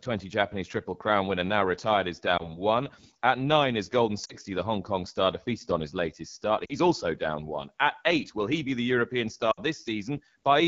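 Speech coded with the AMR wideband (HD Voice) codec, which sounds rough and raspy throughout, consistent with one of its lowest rates, near 8.85 kbit/s. Lost AMR speech frames cause brief concealment dips and warbles at 2.38–2.62 s after "winner now retired is", 4.25–4.34 s, 6.65–6.75 s between "on his latest start" and "also down one", and 9.52–9.60 s, each fitting one to three missing 20 ms frames.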